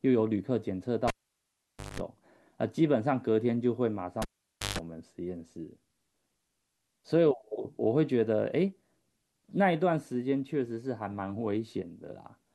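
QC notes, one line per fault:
1.08–2.00 s: cable pulled and plugged in. A pop, about 0.87 s of near silence, then 0.19 s of 50 Hz mains buzz as the tip touches, another pop.
4.22–4.79 s: cable pulled and plugged in again. Pops bracket 0.52 s of near silence and a 0.15 s 50 Hz buzz, unlike a plain dropout.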